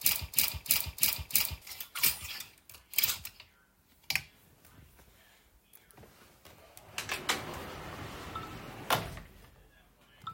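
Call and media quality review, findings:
Broken-record loop, 0.00–1.62 s, already running at clip start: likely a stalled player, encoder or stream resending its last held fragment. A 323 ms slice of the sound repeats back to back four times; the audio due in that span is lost.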